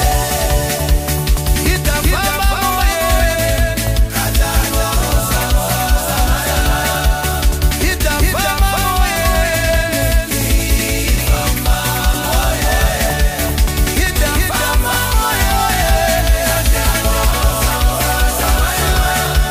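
A doubled audio track runs through the whole clip, most likely because the signal is being picked up a second time by a slower path, so two copies reach the mix out of step. The result is a full-band repeat of everything trailing the original by roughly 400 ms, at about 5 dB below it. The copy carries no decay or room colouring, so each sound is heard twice as a clean, distinct echo rather than as reverberation.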